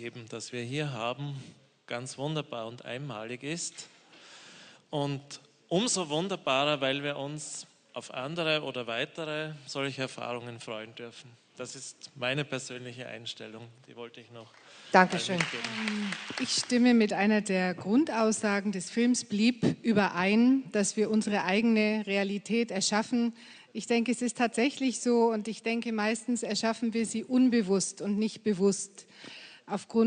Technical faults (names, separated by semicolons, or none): none